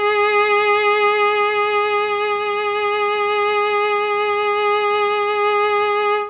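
Music clip: no technical faults.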